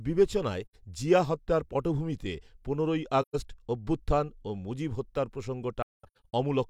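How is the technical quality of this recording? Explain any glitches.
The speech has four audible dropouts: three soft, fading holes and one tiny hard tick.

At 0.65 to 0.75 s, just before "জিয়া হত্যার পটভূমিতে পনেরোই", the speech fades out and back in over about 85 ms. This is AAC frame loss with muting. The decoder zeroed the missing spectrum, which fits two lost frames, and the overlapping windows smooth the edges. The same happens at 3.21 to 3.36 s, between "জিয়া হত্যার পটভূমিতে পনেরোই" and "অভ্যুত্থান ও মুজিব". That hole lasts about 128 ms, which is consistent with three frames. From 5.82 to 6.33 s the losses come in scattered bursts totalling about 384 ms across half a second. The longest muted stretch is around 200 ms, so the ending sounds choppy and broken.

At 5.16 s, shortly after "অভ্যুত্থান ও মুজিব", there is a sharp tick. This is a block of digital silence about 3 ms long. 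The samples dropped abruptly to zero and returned with no fade, so the short gap is heard as a tick. It most likely comes from an output buffer that wasn't filled in time.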